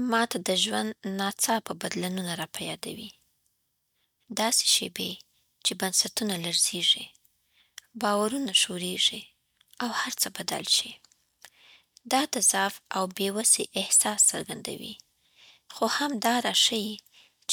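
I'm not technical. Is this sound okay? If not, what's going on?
Yes, this sound is okay, and there's nothing wrong going on.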